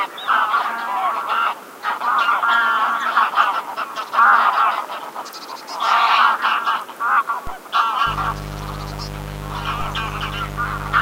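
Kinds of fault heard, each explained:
DC step: The waveform's zero line jumps abruptly by about -18 dBFS, heard as a low thump at 7.47 s and 9.81 s. The offset then decays away, as a 5 Hz high-pass would allow.
Mains buzz: Sharp switching spikes twice per 50 Hz cycle add harmonics reaching into the kilohertz range. A steady, raspy buzz sits about 10 dB below the sound from 8.06 s to the end.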